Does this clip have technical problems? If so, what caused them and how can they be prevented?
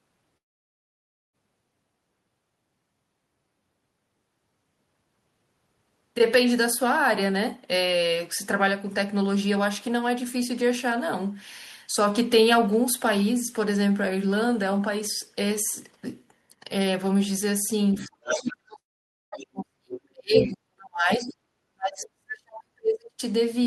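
Yes. The speech has two long network dropouts, a stretch of speech suppressed in double talk, and several moments of the other side's voice leaking through.

Long network dropout: from 0.37 to 1.36 s, and again from 18.79 to 19.35 s, the sound is replaced by a brief fading continuation of what came before, then near silence. Speech resumes afterward with roughly 0.96 s and 0.54 s missing. A packet stream that likely stopped arriving for that long explains this. A short packet loss, by contrast, would be concealed as a blip of tens of milliseconds, not a gap where audio is plainly missing. Prevention: a more stable network path and a larger jitter buffer.

Speech suppressed in double talk: from 17.95 to 23.21 s, about five seconds, the talker's level sinks and breaks up while the far side is also talking, falling by about 40 dB at its deepest. The likely cause is the echo canceller treating the talker as echo and attenuating everything during overlap. 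A dropout leaves a clean hole. This is a pumping, partial loss that tracks the far side's activity. Prevention: an echo canceller with better double-talk detection, or a headset.

Other side's voice leaking through: a second voice appears from 17.96 to 18.10 s and from 21.27 to 21.34 s, faint at roughly 20 dB below the talker. It comes back from 18.29 to 18.53 s and from 20.37 to 20.49 s, nearly as loud as the talker. These are short scraps of residual loudspeaker echo that the canceller likely failed to remove. Unlike background crosstalk in the room, they come and go with the far side's speech. Prevention: lower loudspeaker volume or headphones.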